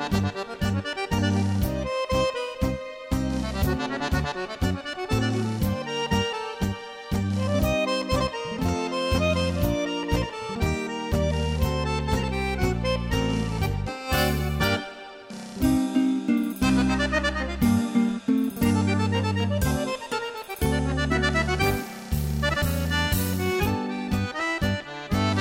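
No technical faults can be heard anywhere in this audio. The sound holds steady throughout, with no moment that stands out as a problem.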